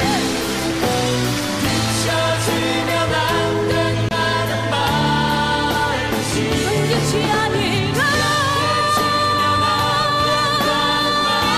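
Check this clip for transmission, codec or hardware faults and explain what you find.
One fault is audible: a Bluetooth stall between 4.09 and 4.14 s, where the sound cuts to about 24 ms of true silence and then resumes. Interference likely delayed packets until the headphones' buffer ran dry. Unlike packet-loss concealment, the gap is clean silence, not smeared or repeated sound.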